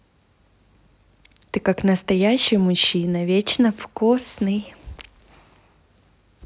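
No technical faults can be heard anywhere in the recording.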